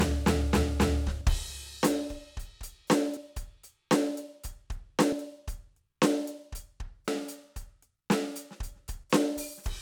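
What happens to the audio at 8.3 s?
Nothing goes wrong at 8.3 s; the music plays through that moment intact, with no dropout, click or distortion.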